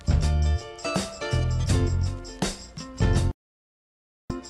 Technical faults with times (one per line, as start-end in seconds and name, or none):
3.31-4.30 digital broadcast dropout